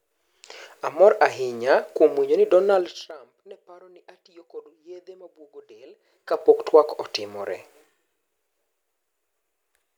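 From 2.72 to 3.20 s, just before "neparo ni ne atiyo", the speech drops by about 25 dB in audible 3 dB jumps, about fifteen a second. From 5.94 to 6.53 s, after "atiyo kod yedhe mabwogo", it climbs back the same way before "twak otimore". This is zipper noise, a gain stepped without smoothing, so each jump ticks. That ticking sets it apart from a smooth fade.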